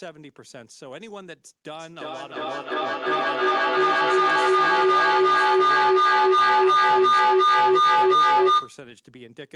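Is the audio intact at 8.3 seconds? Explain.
No. From 1.72 to 8.86 s a feedback howl takes over: a mic-to-speaker loop gains level each trip, building a tone near 1 kHz, with the loop repeating about every 0.3 s, about 18 dB above the speech.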